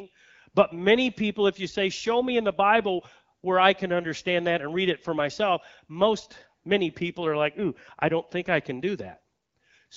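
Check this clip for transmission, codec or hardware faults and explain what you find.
No transmission, codec or hardware fault can be heard in this speech. It has been carried over the AMR wideband (HD Voice) codec at 12.65 kbit/s, and the speech stays clear with only light coding texture in its upper band.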